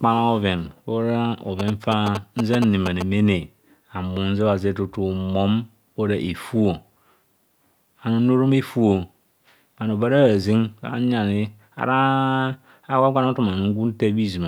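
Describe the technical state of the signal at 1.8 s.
At 1.8 s the speech carries GSM signalling bursts, running from 1.59 to 3.03 s. A nearby 2G phone is signalling, and the audio circuit rectifies its radio bursts. The result is a galloping train of short 217 Hz buzzes, only slightly quieter than the speech.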